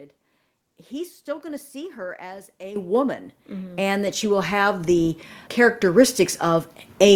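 The speech jumps abruptly louder three times, voice and background rising together: by about 11 dB at 2.76 s after "see her as a", about 5 dB at 3.78 s before "and that she will", and about 3 dB at 4.8 s after it. Each is a microphone volume step-up, where the call software raised the input level in one stride.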